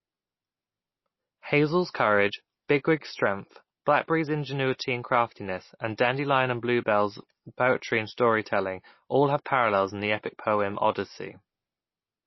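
Throughout the speech, the audio carries plainly audible MP3 compression, likely from a low-bitrate encode around 24 kbps. Nothing remains above about 5.8 kHz, a fixed treble cutoff. Weak frequency lines flicker on and off between frames, giving a watery, swirly texture with metallic chirps on s sounds. That swirl is what separates it from a plain low-pass filter.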